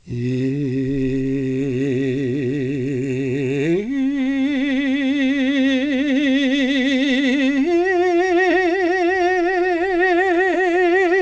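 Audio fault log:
No fault in this music.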